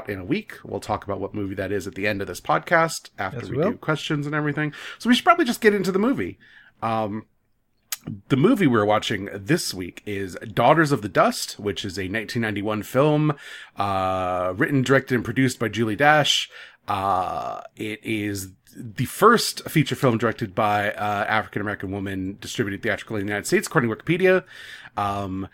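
Nothing in the speech stood out as a technical fault on listening.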